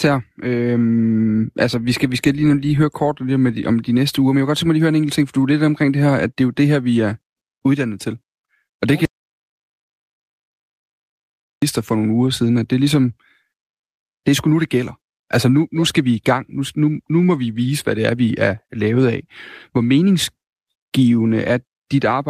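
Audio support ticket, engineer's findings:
Audio dropout to silence, 9.05–11.62 s, after "det kan", resuming at "for nogle uger siden". Flat-line waveform, blank spectrogram, no room tone; likely input loss, writer kept recording zeros.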